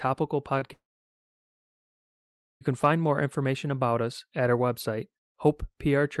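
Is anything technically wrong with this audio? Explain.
Yes. Twice, at 0.59 to 0.63 s and 0.67 to 0.71 s, about 20 ms of the call's audio failed to reach the decoder in time. This is short concealed packet loss. The receiver bridged each gap by extending the preceding sound, so each one comes through as a brief smear or wobble.

From 0.73 s to 2.63 s comes a long network dropout, likely caused by the connection delivering nothing for nearly two seconds. The concealed tail fades quickly, and about 1.8 s of silence follows. The audio resumes at "can find more information", with the intervening part lost.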